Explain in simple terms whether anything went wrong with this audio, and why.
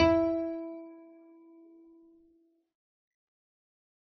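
Low-bitrate audio saved at a high bitrate, heard throughout the whole clip: the music sounds dull and muffled, with nothing at all above about 6.8 kHz, so bright detail is missing. This likely happened because the music was first squeezed into a very small file, which threw away the high end, and then saved again as a large, high-quality MP3. The bigger file can't bring back what was already removed.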